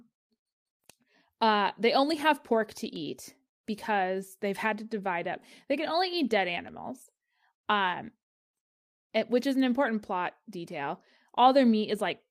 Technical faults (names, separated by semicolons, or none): none